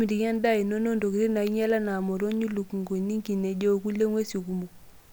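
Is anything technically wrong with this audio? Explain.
No, nothing stood out as technically wrong when listening to this speech recording.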